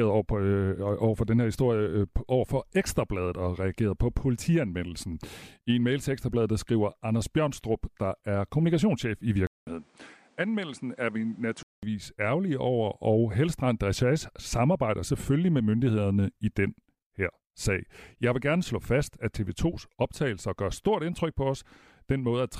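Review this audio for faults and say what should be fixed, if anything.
At 9.47 s, after "der er kommunikationschef i", there is 200 ms of silence. The speech then turns dull, about 5 dB quieter, with nothing above 10.6 kHz and faint new background noise. It clears at 11.83 s, before "ærgerlige over og". The likely cause is an input switched to a poorer device. Lock the recording input so the system cannot change devices mid-take.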